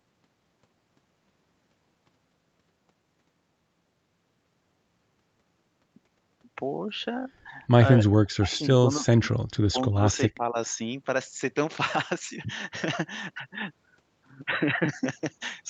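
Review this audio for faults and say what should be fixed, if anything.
Speech suppressed in double talk, 8.03–9.47 s and 9.72–10.56 s: the sound dips by up to about 40 dB, then about 20 dB, in pieces, likely because the echo canceller mistook overlapping talk for echo. Tuning its double-talk detector so near-end speech is held while the far end talks would prevent this.

Echo leak, 8.52–8.58 s and 10.13–10.17 s: brief scraps of a copy delayed by 269 ms, about 30 and 40 dB below the speech, likely slip past the far side's echo canceller. A better-converged canceller, or lower loudspeaker volume or headphones on that side, would prevent this.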